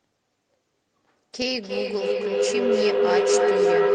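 From 1.46 s to the end of the clip, a feedback howl builds: the sound leaks from a loudspeaker back into a microphone on the same call, and each trip around that loop comes back louder. The repeats pile up and narrow into a tone near 400 Hz, repeating roughly every 300 ms, and it peaks about 8 dB above the speech. On a spectrogram this shows as a thin, brightening horizontal line near 400 Hz; the waveform's envelope swells.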